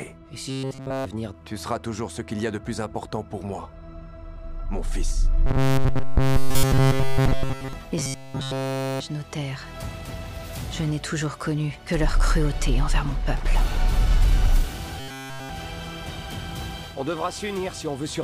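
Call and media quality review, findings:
Likely audio starvation: a short buffer of about 7.5 ms is replayed in place of nearly all incoming audio, giving robotic sound from repeated short buffers, a rigid 134 Hz buzz at 0.49–1.06, 5.46–7.73, 7.98–9.00 and 15.00–15.49 s.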